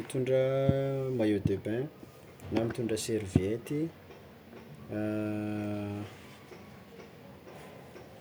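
No technical faults detected.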